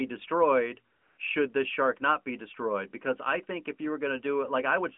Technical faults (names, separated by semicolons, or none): AMR comfort noise